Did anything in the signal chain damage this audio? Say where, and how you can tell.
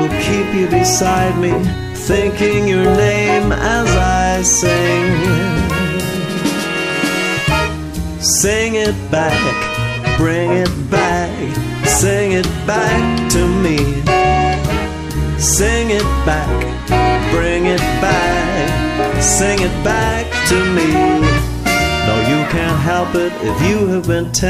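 No, nothing in the signal chain damaged this audio.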